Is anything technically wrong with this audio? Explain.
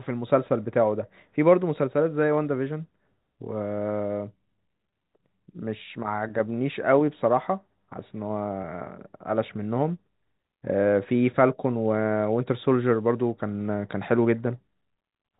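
Yes. There are two brief dropouts, each a case of packet loss with pitch repetition, at 4.90 to 4.92 s and 8.62 to 8.64 s. Each gap is 20 ms, which fits a single lost packet. The receiver covers each gap by repeating the last pitch period. Because the gaps are short, the repetition never reaches its fade to silence. Instead, each spot sounds like a slightly held, buzzy stretch of the speech before normal audio resumes. The G.711 telephone coding of the call limits the bandwidth to below 4 kHz.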